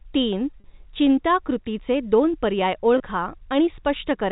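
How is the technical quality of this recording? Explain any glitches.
Two brief glitches interrupt the speech. At 0.60 to 0.64 s and at 2.98 to 3.00 s the sound momentarily holds on a slightly buzzy tone. This is packet loss with pitch repetition: the receiver repeated the last pitch period to bridge missing audio, about 40 ms then 20 ms, which fits two lost packets and then one. The G.711 telephone coding limits the sound to the band below 4 kHz.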